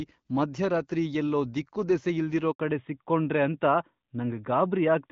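At 2.52 s the speech just drops out for about 80 ms, a handover gap, where the call got passed between networks and no speech frames made it through during the switch. The sound fades within a few tens of milliseconds and stays silent until the new link picks up at 2.60 s, so whatever was said in there is gone.

Right after that, from 2.60 s to the end, there's a fallback to narrowband. Up to then the clear HD Voice character fits AMR-WB at around 12.65 kbit/s, but afterwards nothing survives above 4 kHz, pointing to AMR-NB at 12.2 kbit/s. The voice goes duller and rougher.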